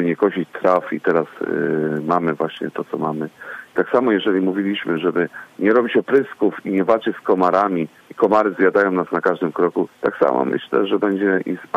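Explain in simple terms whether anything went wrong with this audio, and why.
Nothing went wrong here: listening all the way along, there's no spot where the sound trips up, so there's nothing to fix or explain.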